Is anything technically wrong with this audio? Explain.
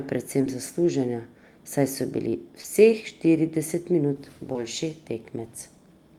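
Yes, there is short concealed packet loss in this speech at 0.41–0.45 s (before "zaslužena saj so bili"), 2.61–2.66 s (before "štirideset minut") and 4.52–4.56 s (after "štirideset minut"). Each time, about 20 ms of audio failed to arrive, and the decoder extended the preceding sound to fill it, for roughly 16, 32 and 22 ms. Each gap is heard as a brief smear or wobble. On a spectrogram, the harmonics or noise freeze and repeat before blending back. On the waveform, there is a short, overly regular patch.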